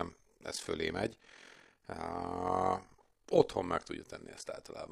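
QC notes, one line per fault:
throughout, overlap-add ripple: the speech has a rough, robotic tremolo pulsing around 40 times a second, with level swings of about 11 dB. It was split into windowed frames and rejoined with an overlap whose gains don't sum evenly, so loudness dips once per frame.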